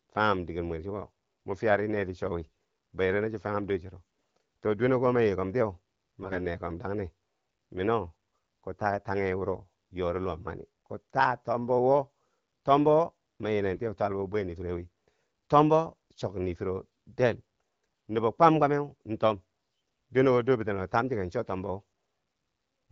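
AMR bit errors, with roughly one weakly protected bit in ten flipped, misplace the excitation pulses from 4.01 to 4.43 s (between "cho fanghum dor chero" and "to dwene"), 6.21 to 6.46 s and 13.73 to 13.80 s. Pitch and level hold, but the speech turns hoarse and gargly.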